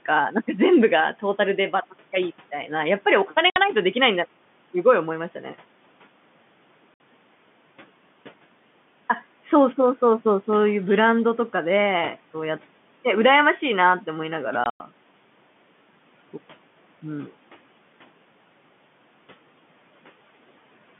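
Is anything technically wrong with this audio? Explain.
Yes. The speech has packet loss filled with silence. Holes open at 3.50 to 3.56 s and 6.94 to 7.00 s, each 60 ms, and a ragged stretch at 14.64 to 14.80 s loses 120 ms spread over 160 ms, the longest run 100 ms. Every gap is a whole multiple of 20 ms, which fits 20 ms packets. The receiver played nothing in their place, so the audio drops to dead silence with hard edges. Even the faint room noise disappears, and the narrow telephone band goes with it. Concealment would instead smear or repeat the preceding sound.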